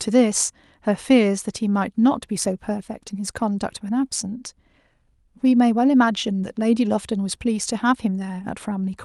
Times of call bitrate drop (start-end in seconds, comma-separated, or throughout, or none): 1.85-3.49